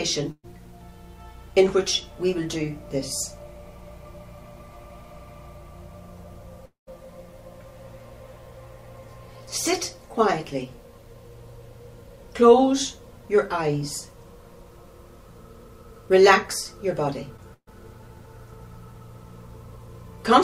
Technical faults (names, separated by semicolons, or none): burst of packet loss; long network dropout; short concealed packet loss